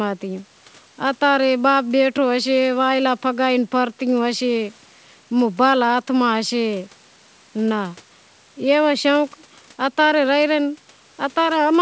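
No technical faults are audible.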